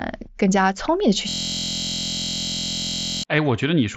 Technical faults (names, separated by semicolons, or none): system hang loop; concealed Bluetooth headset packet loss